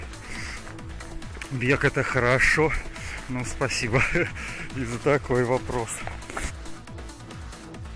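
No audible technical faults.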